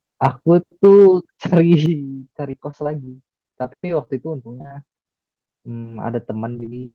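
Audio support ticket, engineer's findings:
Microphone overload: harsh crackle on loudest peaks at 0.24–0.27 s (about 5 dB over), 0.84–1.07 s (about 3 dB) and 1.53–1.75 s (about 2 dB). Likely input gain too high, converter ceiling reached. Waveform shows flat-topped peaks; spectrogram shows broadband vertical smears.

Microphone volume stepped down: abrupt level drop at 0.85 s (about 2 dB) and 1.86 s (about 7 dB). Likely call software's automatic gain cutting mic input. Waveform envelope and background noise floor both step down together.

Repeated packet loss (robotic sound): choppy stretches at 2.51–3.09 s, 3.51–4.08 s, 4.58–5.01 s and 6.52–6.75 s. Four gaps each, up to about 26 ms, patched by repeating prior sound. A third of the final span is filled in. Spectrogram: repeated frozen harmonic slices.

Short concealed packet loss: brief smear at 5.42–5.46 s and 5.80–5.84 s. About 20 ms lost each time, filled by extending the preceding sound and blending back. 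Spectrogram: short stretch of held, blurred content.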